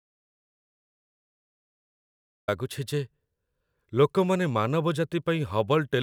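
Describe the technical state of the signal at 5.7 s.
At 5.7 s the speech signal is intact, with no fault present at that moment.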